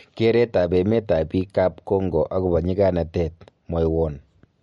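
From start to finish the speech carries plainly audible MP3 compression damage, likely from a low-bitrate encode; the loss fits roughly 48 kbps. Nothing reaches above 11.2 kHz, so s sounds lose their crispness, and weak detail flickers in and out between frames, giving a watery, swirly texture with smeared consonant attacks. A spectrogram would show a hard, flat ceiling at 11.2 kHz and patchy, blotchy holes in the quieter upper bands.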